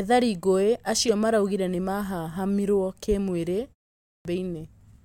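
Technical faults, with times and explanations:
4.03–4.25 s, clipped start after a pause: after "mahahamirwo kĩ mwĩ rĩ" and a gap of about 0.37 s, the output device has gone to sleep and needs about 220 ms to wake and lock again. The opening of the next stretch of speech is swallowed, so it begins abruptly, missing its first sounds. On a waveform the trace stays flat until 4.25 s, then jumps straight to speech level with no rising attack. A spectrogram shows the energy starting at a hard vertical edge.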